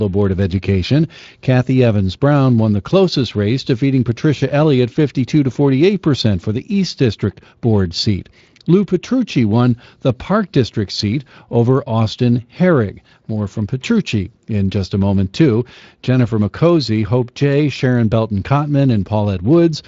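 This speech clip has nothing technically wrong with it.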